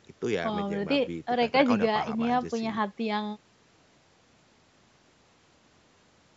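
Listening through this speech clip, nothing stood out as a technical problem, and the call microphone processing can be heard trimming away the lowest bass.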